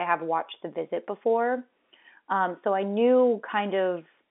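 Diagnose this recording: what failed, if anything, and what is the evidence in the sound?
Nothing has failed in this speech recording: it is simply telephone audio over a G.711 mu-law line, which is why it has the narrow 200 Hz to 3.6 kHz band of an ordinary phone call with nothing above about 3.8 kHz.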